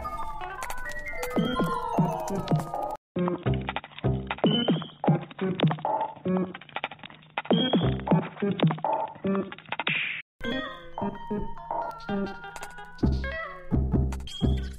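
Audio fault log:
2.96 to 10.41 s, input switched to a poorer device: a gap of about 200 ms, then the sound turns dull and boxy, with nothing above 3.8 kHz and a faint new background noise far below the signal. Loudness holds steady. The likely cause is a narrower-band microphone or headset taking over.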